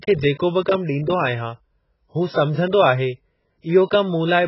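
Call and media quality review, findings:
Speech dull and smeared throughout, with a warbling, fizzy texture on sustained vowels and sibilants. Nothing above 5.6 kHz. AAC compression, likely AAC-LC at a very low rate, consistent with about 12 kbps. The encoder pulls the band limit down and coarsely quantises the remaining frequency lines. Heavy damage: smearing.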